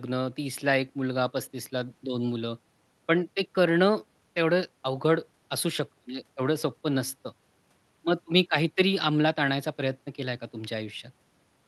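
No technical faults can be heard anywhere in the recording; the speech signal stays intact and continuous throughout.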